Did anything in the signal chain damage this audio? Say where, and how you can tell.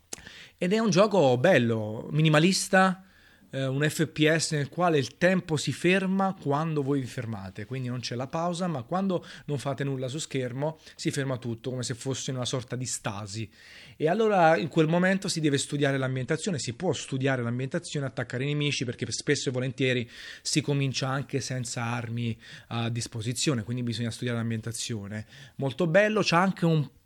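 Yes, at the network and codec stage: an adaptive stream at a lower bitrate from 16.0 to 20.0 s. The speech abruptly loses its top end, with nothing above 11.1 kHz, and takes on a swirly, compressed texture, which points to a switch from an MP3 stream around 128 kbit/s down to one near 48 kbit/s. Unlike packet loss or a dropout, there is no gap or glitch. The quality steps down and back up cleanly at the segment boundaries.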